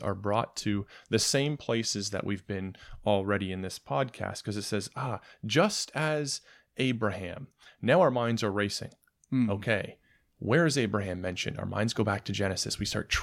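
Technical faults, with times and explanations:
No technical faults can be heard anywhere in the recording. Nothing in the audio calls for a time or an explanation.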